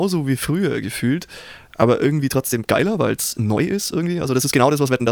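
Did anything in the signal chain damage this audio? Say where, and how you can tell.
Yes. From 2.14 s, right after "wie früher gefühlt aber", to the end, the speech runs about 1.48 times faster and sounds rushed, yet the pitch stays put. This time-stretched section likely comes from processing that dropped short pieces to shorten it. A sample-rate mismatch would raise the pitch along with the speed.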